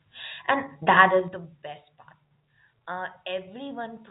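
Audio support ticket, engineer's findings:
Zipper noise, 1.11–1.54 s: ticking as level drops around 15 dB in about 3 dB jumps, roughly ten a second. Gain stepped unsmoothed; each jump clicks.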